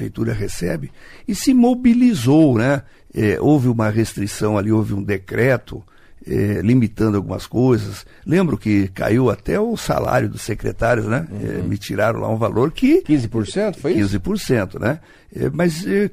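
At 10.05 s there is a repeated buffer. Audio arrived late, so a piece of about 5 ms played twice. It sounds like a brief click.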